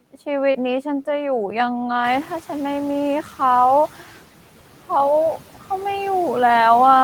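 Speech, with a noise suppressor working on it for the whole clip. The suppressor lowers the steady room noise by about 12 dB. It does this frame by frame, so the noise dips between words and comes back up under them. That pumping leaves noise suppressor artifacts. A short concealed packet loss occurs from 0.51 to 0.56 s. Roughly 40 ms of audio did not reach the decoder in time. The receiver covered about 30 ms of that gap by extending the sound just before it, then blended back into the real signal. The result is a brief smear or wobble in the speech at that point. Around 2 s the room noise itself jumps by about 16 dB. It then sits about 18 dB below the speech. That rise is in the room, not a fault. What follows is the noise suppressor catching up, from 2.04 to 2.37 s. Its noise estimate lags behind the new level, so at first the louder noise passes with only about 7 dB of reduction. Over roughly 330 ms the estimate adapts, and the noise sinks back down. 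This is heard as a short swell of background noise that fades away.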